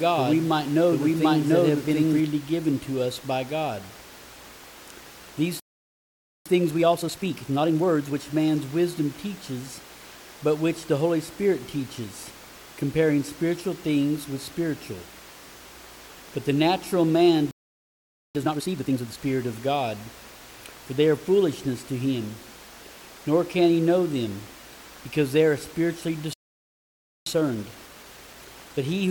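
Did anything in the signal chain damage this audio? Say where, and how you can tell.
Yes. A doubled audio track runs from the start to 2.2 s, likely from a second capture path. A full-band copy trails about 0.7 s behind at roughly equal level and cuts off abruptly. A spectrogram shows the same pattern repeated and shifted right.

Playback stalls occur at 5.60–6.46 s, 17.51–18.35 s and 26.33–27.26 s. Each is about 0.84–0.93 s of silence in mid-flow, a flat line on the waveform, likely a buffer underrun or blocked playback thread.

A time-compressed catch-up follows each stall: 6.46–8.16 s at 1.5x, 18.35–19.17 s at 2x, and 27.26 s to the end at 1.15x. The sound is hurried with unchanged pitch. Spectrogram harmonics stay level while events crowd together.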